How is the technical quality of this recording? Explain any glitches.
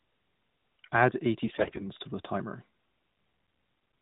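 The main problem is a short burst of AMR bit errors between about 1.46 and 1.85 s, just before "to the timer". The speech runs through the narrowband AMR mobile codec, with nothing above 4 kHz. For 17 of the 20 ms frames, a heavy share of the less protected bits arrived flipped. Something like one bit in seven is wrong, but the frames still pass their checksum. The excitation pulses land in the wrong places and the fine gain and spectral values drift. The voice keeps roughly its pitch and level but turns hoarse, scratchy and gargly for that moment.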